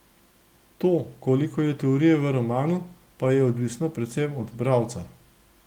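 Speech recording with no audible technical faults anywhere.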